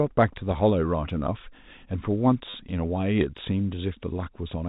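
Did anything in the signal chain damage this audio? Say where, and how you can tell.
Yes, in the network: packet loss with last packet repeated, 2.50 to 2.54 s, 40 ms. Replaying the same packet out of step with the pitch leaves a brief robotic stutter.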